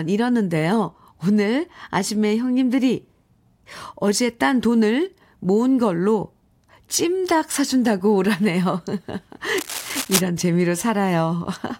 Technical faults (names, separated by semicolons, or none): cable scratch noise